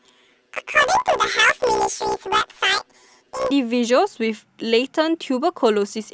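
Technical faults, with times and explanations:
0.00–3.51 s, planar audio read as interleaved: the speech takes on a robotic buzz at about 62.5 Hz with no clear octave jump. Each 16 ms block of the stereo stream is stored as a run of left samples followed by a run of right samples, but it is read as alternating left-right pairs. Every block therefore plays twice at double speed, left half then right half. With blocks this short, which fits a 256-sample block size, the repeats fuse into a buzz at the block rate rather than an audible octave shift.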